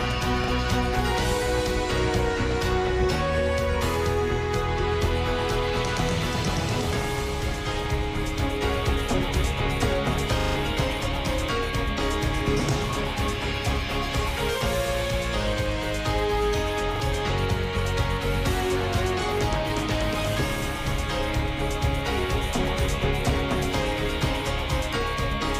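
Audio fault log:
0.44–0.48 s, 10.40–10.56 s, 16.96–17.00 s: repeated buffer. Each time, a short slice of sound plays again with a hard seam, which fits a 40 ms buffer. It plays twice at 0.44 and 16.96 s, a brief stutter. At 10.40 s it plays five times, a buzzy rattle that loses roughly 150 ms of audio. The gap is filled with identical repeated material rather than the silence of a dropout.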